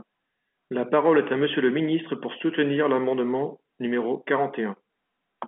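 No technical faults are audible.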